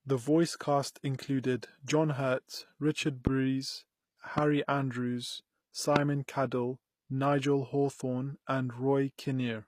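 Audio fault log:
Throughout: HE-AAC compression. The treble has that gritty, metallic edge, with s sounds going lispy and nothing at all above 15 kHz. The damage is plainly audible. This is likely the work of HE-AAC at a low rate, consistent with something around 24 kbps. Only the lower band gets coded properly, and the top end is rebuilt by copying lower bands upward under a coarse envelope, so the harmonics don't line up across the crossover.
1.42 s: pre-echo. Right after "voice cast" there's a brief hiss, about 16 ms, leading into the next attack, which sounds softened. The codec spreads its quantisation noise evenly across a whole block. With a sharp onset landing late in that block, noise sized for the loud part spills into the quiet gap just ahead of it.
3.27–3.29 s, 4.38–4.40 s, 5.96–5.98 s: loud pop. Three single sharp pops sit on top of the speech, which carries on underneath. 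The first two are about 20 dB above the signal and the last is louder, about 25 dB. Each is likely a sudden voltage step or pulse, from a plug, a switch, static or a driver glitch, added into the signal and shaped by the circuitry that follows.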